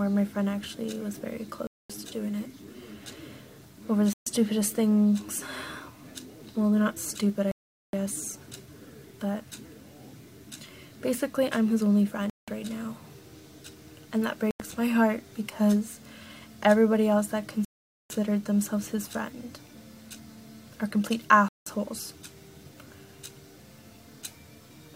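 Seven dropouts, at 1.67, 4.13, 7.52, 12.30, 14.51, 17.65 and 21.48 s, each cut the sound to silence for 0.09 to 0.45 s before it resumes. They are likely a Bluetooth stall, with delayed packets emptying the playback buffer. Each shows as a flat waveform gap and a blank vertical band on the spectrogram.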